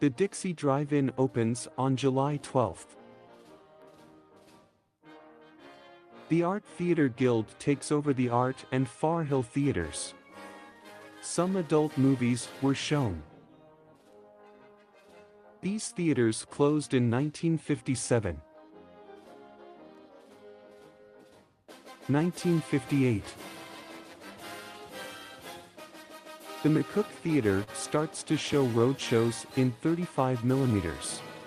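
At 27.63 to 27.70 s, a late packet left the jitter buffer empty, causing a short stall: the preceding sound is stretched by 38 ms, held with a slight buzz or dip, nothing lost.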